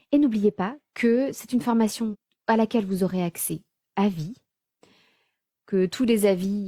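At 2.09 to 2.16 s the speech jumps ahead: compressed frames were skipped, so around 0.4 s of audio never plays. Several whole frames were lost or rejected as damaged by the decoder, and the jump fits a frame length of about 46 ms. Unlike a dropout, there is no silent gap, only missing material.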